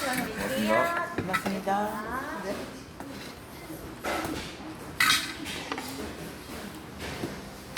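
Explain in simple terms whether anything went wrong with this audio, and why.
Nothing went wrong with this audio, so there is no fault to explain.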